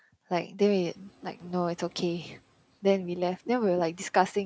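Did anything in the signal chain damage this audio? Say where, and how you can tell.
Yes: the noise suppressor is catching up from 0.73 to 0.9 s, in the call processing stage. Room noise jumps about 24 dB around half a second in, passes with too little reduction, then sinks by about 6 dB over 170 ms as the suppressor's noise estimate adapts.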